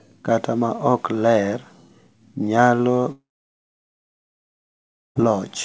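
From 3.12 s to 5.17 s the speech cuts out in a long network dropout. The last sound trails off briefly, then nearly 2 s of silence follows. Audio likely stopped arriving, and that stretch never returns. The band above 8 kHz is absent throughout, which fits a G.722 call path.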